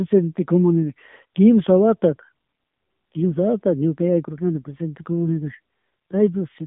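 AMR narrowband mobile codec damage runs through the entire clip. The speech has been squeezed into an 8 kHz-sampled mobile channel, so the line band spans only about 150 Hz to 3.6 kHz and nothing above 3.7 kHz survives. The codec rebuilds each 20 ms frame from a vocal-tract model and a few excitation pulses. At a rate that points to one of the lower modes, near 8 kbps, that reconstruction is plainly audible as a buzzy, synthetic edge on the voice.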